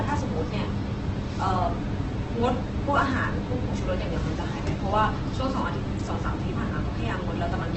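Throughout the speech, the sound is rough and grainy, with nothing above 8.2 kHz. Voiced tones turn noisy rather than swirling. The likely cause is heavy Opus compression in its music mode. Starved bands get filled with folded or noise-like content, which fits about 12 kbps.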